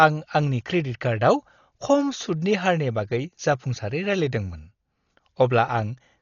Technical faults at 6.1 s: Dolby Digital compression

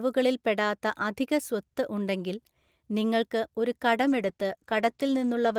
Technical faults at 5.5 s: call bitrate drop

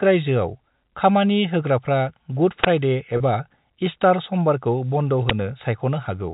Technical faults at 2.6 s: uninitialised buffer

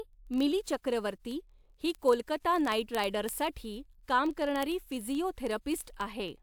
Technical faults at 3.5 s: word clock ticks

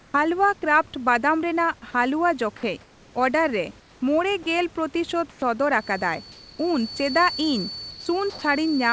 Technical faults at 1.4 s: none

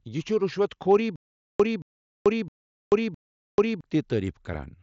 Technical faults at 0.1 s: none

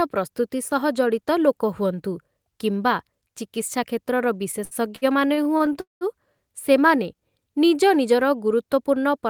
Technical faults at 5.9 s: call audio freeze

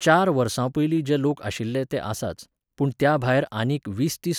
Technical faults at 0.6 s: none

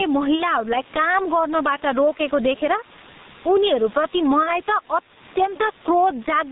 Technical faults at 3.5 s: gain pumping; G.723.1 codec

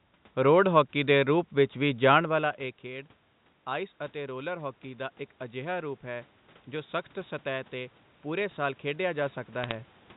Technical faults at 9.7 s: bit errors on a digital phone line

